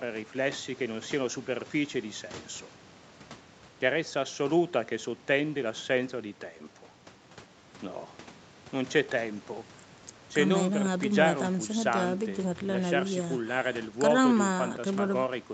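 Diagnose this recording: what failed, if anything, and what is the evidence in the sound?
Nothing failed: the speech shows only the expected call-path signature, band-limited with nothing above 8 kHz, as fits a wideband call codec, and no event in the audio points to a failure at any stage.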